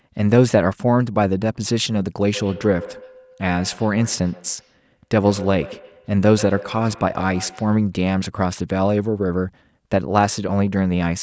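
Two devices on the same call are sharing one room, so one loudspeaker replays what the other's microphone sent and that microphone captures it again, creating a feedback echo between two devices that neither echo canceller removes. From 2.34 s to 7.83 s this speech returns at an interval of about a tenth of a second, with the strongest repeats about 17 dB below the talker. The call's microphone processing limits the band to nothing above 8 kHz.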